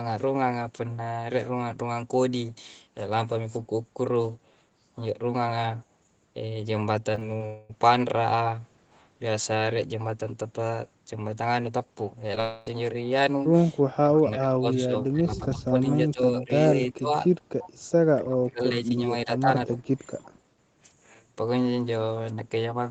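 Speech carried over a call path that tops out around 8 kHz shows three kinds of fault. Short concealed packet loss at 7.15 to 7.23 s, 7.37 to 7.42 s and 12.35 to 12.38 s: lost 20 ms chunks were patched by extending the preceding sound, leaving brief smears or wobbles. A long network dropout at 7.46 to 7.71 s and again at 12.40 to 12.68 s: about a quarter second of audio went missing, likely from a network gap, and the receiver bridged it with a fading continuation of the last sound before real audio resumed. Speech suppressed in double talk at 13.94 to 16.51 s, 16.96 to 17.14 s and 18.26 to 18.91 s: the level dips by roughly 20 to 30 dB in patches, likely the echo canceller turning the talker down while the far side was also speaking.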